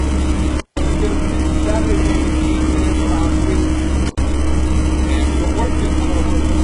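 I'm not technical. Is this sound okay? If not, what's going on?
No. Throughout, the treble sounds gritty and metallic, and nothing above about 11 kHz is left. That is likely heavy HE-AAC compression, which rebuilds the highs from lower sounds.

There is also an intermittent contact, like a loose plug. The sound cuts out with crackle from 0.58 to 0.79 s and again from 4.06 to 4.21 s.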